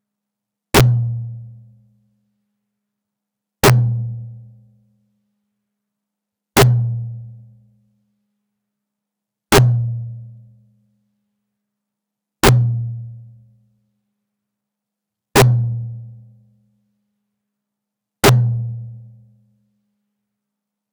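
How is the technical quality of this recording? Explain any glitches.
The recording is marred by repeated integer overflow: seven loud passages, about 6 to 7 dB over full scale, wrap around instead of limiting, at 0.75–0.81, 3.64–3.70, 6.57–6.63, 9.52–9.58, 12.44–12.49, 15.36–15.42 and 18.24–18.29 s, roughly every 2.9 s. Each peak flips to the opposite sign, producing violent cracks much harsher than clipping. Waveforms show sudden full-range jumps; spectrograms show bright broadband vertical streaks.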